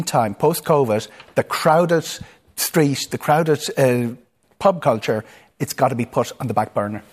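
Speech, with no technical faults.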